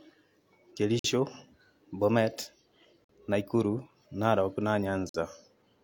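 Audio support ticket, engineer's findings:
Gap between chunks: stream delivered in 2.0 s chunks with about 50 ms of silence inserted at each join; probable chunk-boundary handling in player or packetiser. Dropouts in the speech at 0.99, 3.04 and 5.09 s, each 50 ms long; no audio lost, just pushed later.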